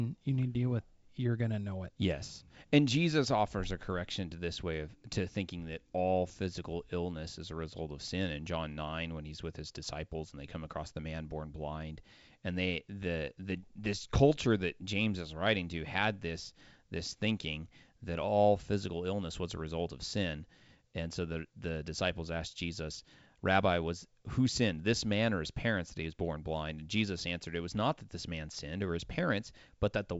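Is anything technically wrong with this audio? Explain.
No, nothing here sounds technically wrong.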